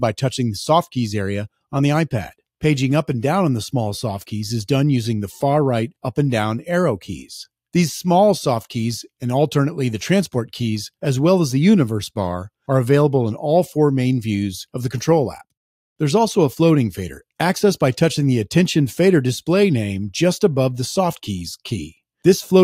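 Nothing in the audio stood out as a technical problem on listening.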